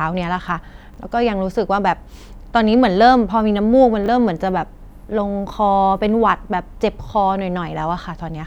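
At 0.94 to 0.98 s, and again at 4.04 to 4.08 s, the speech has a brief case of chunks out of order. Two adjacent 20 ms pieces get swapped, with one chunk landing a single slot late, so nothing's missing but the sequence is wrong. You hear a tiny scrambled blip, since each swap leaves three hard joins where the waveform doesn't line up.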